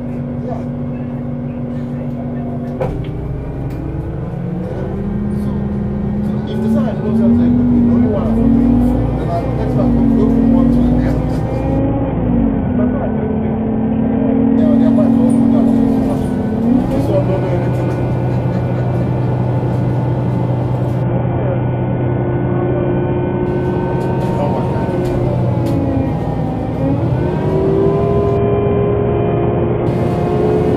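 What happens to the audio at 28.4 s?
At 28.37 s there's a Bluetooth SBC bit pool drop until 29.86 s: the link starves, the treble dulls and gritty noise creeps in, which points to a rate of roughly 55 kbps.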